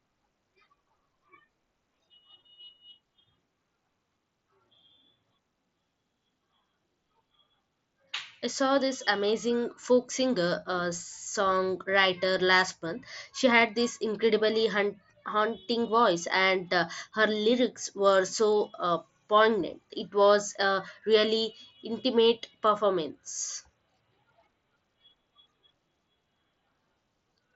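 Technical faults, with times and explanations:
12.72 s, concealed Bluetooth headset packet loss: a gap of about 7.5 ms, likely a single lost packet, is filled by repeating recent waveform, so the fault is nearly inaudible.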